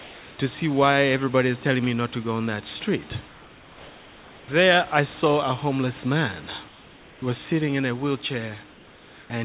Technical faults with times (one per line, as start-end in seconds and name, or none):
0.00-0.38 comfort noise in place of the background
3.28-4.48 comfort noise in place of the background
6.68-7.22 comfort noise in place of the background
8.72-9.30 comfort noise in place of the background